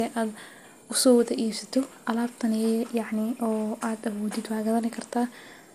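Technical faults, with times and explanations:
Throughout, generation loss: the speech sounds swirly, smeared and hollow, attacks are blurred, and nothing reaches above 15.4 kHz. This is likely from around five rounds of lossy encoding, consistent with MP2 at roughly 96 kbit/s, each pass adding fresh quantisation noise.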